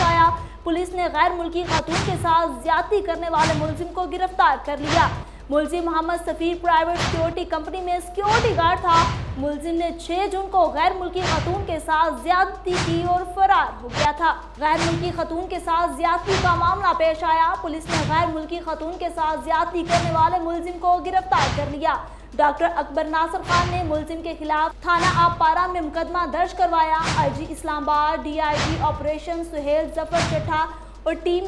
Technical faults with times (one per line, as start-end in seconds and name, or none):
none